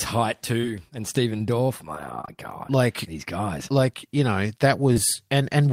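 At 2.21 to 2.29 s, two back-to-back gaps, and again at 4.93 to 4.98 s, short concealed packet loss briefly smears the speech. Each hole is 20 ms of missing audio, which fits one lost 20 ms packet apiece. The receiver bridged each gap by extending the preceding sound and then cross-fading back. That is what separates it from a plain dropout. Instead of silence or a hard click, there is a soft wobble where a consonant can blur away.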